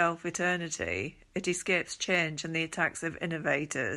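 At 2.15 to 2.21 s, after "eternity it escapes", a loud pop, two sharp clicks standing somewhat above the speech, likely from a switching or static voltage step.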